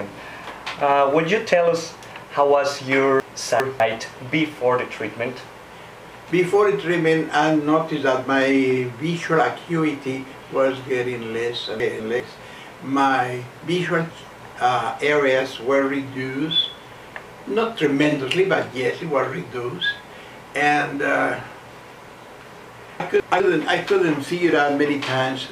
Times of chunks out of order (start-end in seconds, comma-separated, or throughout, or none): 3.20-3.80, 11.80-12.20, 23.00-23.40